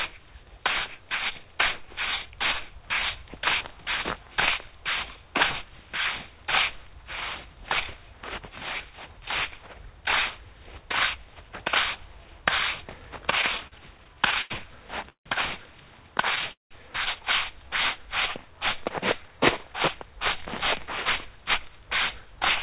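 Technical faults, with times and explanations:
13.24–15.27 s, repeated stalls (stutter): The sound catches and drags fifteen times in about two seconds. Packets arrived too slowly, so the buffer kept emptying. Each gap was bridged by stretching the last sound, about 0.4 s in total, the longest 164 ms. Nothing is lost.
16.52–16.73 s, call audio freeze: The sound halts for 189 ms. A brief continuation of the last sound fades, then 150 ms of silence follows. Packets were likely held up in transit, emptying the buffer. Playback resumes where it stopped, so nothing is missing.
19.63–22.36 s, jitter buffer speed-up: The sound runs about 4 percent fast at unchanged pitch. After a backlog built up, the receiver trimmed many short pitch-period slices to reduce delay. Roughly 150 ms of audio is dropped.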